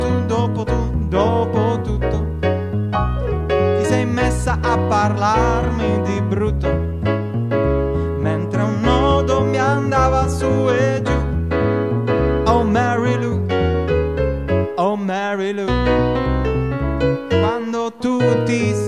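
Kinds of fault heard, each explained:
No faults are audible.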